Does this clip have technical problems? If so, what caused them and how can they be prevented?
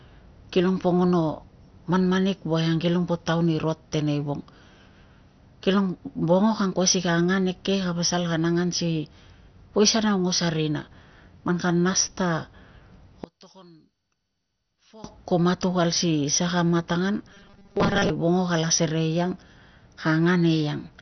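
Yes. Throughout the clip, the sound is dull with nothing above about 6.2 kHz, and it has a gurgling, granular texture. This is likely heavy MP2 compression at a bitrate of around 48 kbps, which starves the upper sub-bands of bits. A plain low-pass filter would sound clean, but here the remaining bands flicker and sound coarse. Encoding at a higher bitrate or with a modern codec prevents this.

From 13.24 to 15.04 s, the level falls by about 18 dB, leaving only a faint residue. One channel inverted is the likely cause: when the channels are summed to mono, the centred content cancels. A dropout would leave silence, not this faint difference signal. Checking polarity before any mono downmix prevents it.

From 17.29 to 18.11 s, the sound turns into a rigid, metallic buzz at 200 Hz. This is robotic sound from repeated short buffers, likely caused by about 5 ms of audio being replayed while most of the real signal is skipped. 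Unlike codec gurgle, it holds one fixed pitch. Larger buffers or a steadier audio feed prevent it.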